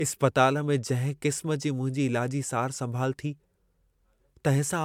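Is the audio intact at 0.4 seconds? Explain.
No. At 0.4 s the speech carries generation loss, which runs through the whole clip: a swirly, hollow, smeared quality with blurred consonant attacks, likely from about four MP3 passes, each requantising on a shifted frame grid. A spectrogram shows speckled holes and ragged high bands below a 20 kHz ceiling.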